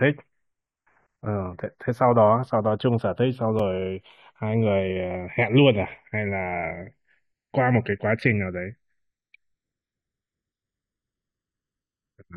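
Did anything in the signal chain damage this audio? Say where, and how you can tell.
Yes. Across the whole clip there is channels drifting apart, a clocking fault at the converter stage: the two channels come from devices running on separate clocks, roughly 50 ppm apart. The inter-channel delay creeps to about 0.7 ms by the end, so in mono the comb notches sweep slowly. That gives a gradual flanging rather than a fixed, static comb coloration.

At 3.59 s there is a gap between stream segments, a network or playback-stage fault. A hard-edged hole of about 3 ms of silence sits where two segments' timestamps fail to meet. Unlike a dropout, nothing is missing: the sound resumes intact, merely pushed later.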